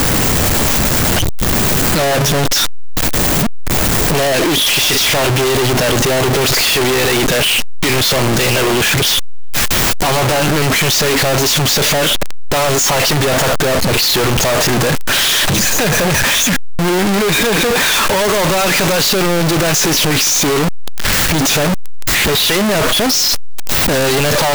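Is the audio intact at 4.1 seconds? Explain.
No. At 4.1 seconds, as throughout the clip, the speech is a loud, harsh, near-square waveform at an almost fixed, high level, with background noise as loud as the voice. This is likely a float read as integer: 32-bit float samples interpreted as 32-bit integers.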